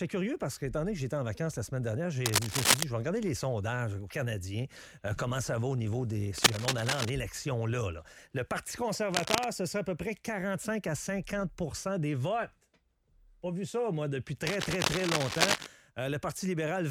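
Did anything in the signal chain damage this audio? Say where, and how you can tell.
Yes. Cable scratch noise, in the analogue wiring. Dense, uneven scratchy bursts ride over the sound at 2.25–2.83, 6.38–7.10, 9.12–9.47 and 14.47–15.67 s. The first two are louder than the sound, the last two about equal. The likely cause is a worn cable or connector whose contact resistance shifts as it moves.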